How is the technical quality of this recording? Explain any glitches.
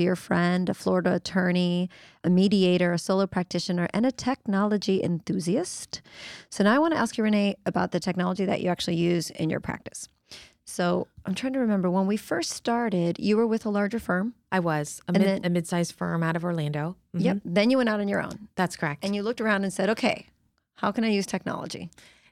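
No technical glitches can be heard anywhere in the recording, and the signal holds steady throughout.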